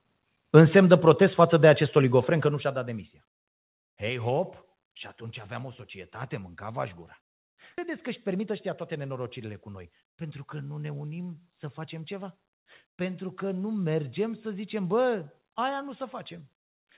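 It's a speech clip with two related timing faults close together. At about 7.78 s, right after "societate mânca aș gura", there's a skip ahead: roughly 0.4 s of audio is simply gone and the two sides are butted together with no fill. It sounds like the jitter buffer overflowed and threw out a chunk while later audio was already queued, so the delay dropped by about that much in one go. Right after, from 7.88 s to 10.32 s, leading into "că nu ne unim", there's a jitter buffer speed-up. The speech runs at about 107% with the pitch unchanged, because the receiver is trimming tiny pitch-period slices over and over, around a fifth of a second in total, to bring the buffer back to its target. That stretch comes across a little rushed. The call path itself sounds like narrowband G.711 mu-law at 64 kbps, with nothing above 4 kHz.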